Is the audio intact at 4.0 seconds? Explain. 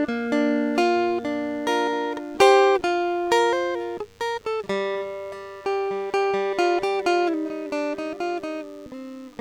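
No. DECT cordless phone buzz runs throughout the music, including 4.0 s: a nearby handset's radio bursts every 10 ms get rectified, adding a thin, faint 100 Hz buzz.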